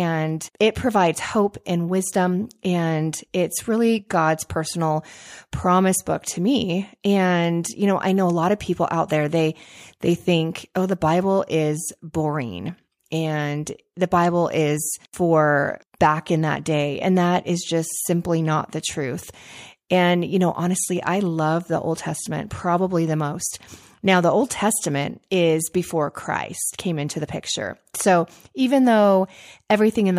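Speech with no audible faults.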